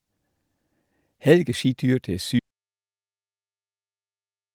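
At 2.39 s the speech cuts off mid-flow and the clip falls into an audio dropout to silence that runs to the end, a little over 2 s of silence. There is no room tone or noise floor in the gap, only complete silence. The likely cause is a lost input, such as a disconnected device, a failed link or a stray mute, while the recorder kept writing empty samples. Whatever followed is absent.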